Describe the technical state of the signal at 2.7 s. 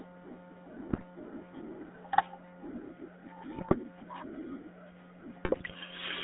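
At 2.7 s the speech has a buzzy, gravelly roughness and sounds narrow, with nothing below 200 Hz or above 3.6 kHz. This is GSM full-rate codec damage, present throughout: a vocal-tract model driven by sparse regular pulses, which fits a 13 kbps full-rate stream.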